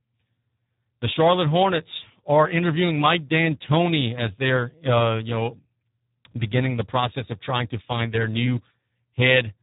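From start to finish, the speech carries Speex codec damage, and it is heavy. The voice sounds hoarse and noisy, which fits a low setting of about 8 kbps. Too few bits reach the excitation signal. Nothing is heard above 3.8 kHz.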